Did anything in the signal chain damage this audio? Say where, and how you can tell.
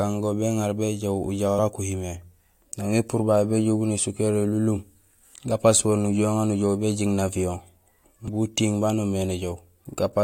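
Yes: brief glitches at 1.58 s and 8.28 s in the speech come from damaged data in a compressed stream, where corrupted codec frames made the decoder lose sync.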